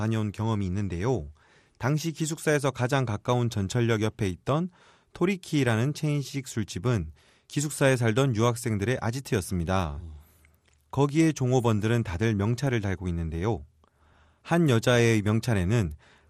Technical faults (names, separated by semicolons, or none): MP2 compression